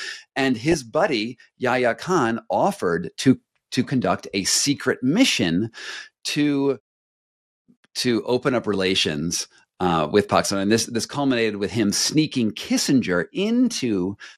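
MP2 compression runs through the whole recording: the speech sounds dull and dark, with a gurgling, granular distortion. This is likely a low-rate MPEG Layer II encode, with the damage plainly audible and fitting a rate near 80 kbps. The codec divides the spectrum into 32 equal sub-bands and shares out bits among them. At this rate the upper bands keep dropping out and returning, and the bands that remain are coarsely quantised.

DAB burbling appears from 0.64 to 0.74 s as a short burst of burbling over the speech. Bit errors, at a rate of a small fraction of a percent, got past the error correction and corrupted the MP2 data. Wrong samples put short blips of noise into single sub-bands. Across this tenth of a second that produces the burbling.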